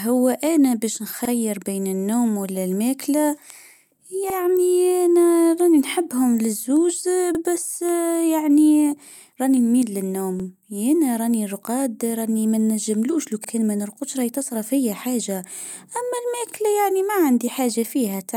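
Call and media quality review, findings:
Stutter at regular intervals, a short repeated fragment of speech at each join: 1.25–1.30, 4.30–4.35, 7.35–7.40, 10.40–10.45, 13.45–13.49, 16.49–16.54 s. Overlapping chunks in the buffering or segmenting stage. Each 3.0 s chunk begins 48 ms before the previous one ends, so that slice of audio plays twice. The even spacing of just over 3 s points to a fixed chunk size with a constant overlap.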